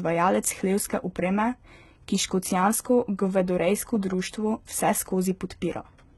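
HE-AAC compression, heavy and running throughout the speech from start to finish: the damage likely comes from spectral band replication. Only the lower band is truly coded, and the treble is rebuilt by copying lower bands upward under a coarse envelope, so its harmonics no longer line up with those below. Sibilants come out gritty, metallic and lispy, and nothing survives above 11.8 kHz. The heaviness points to a very low bitrate, around 16 kbps.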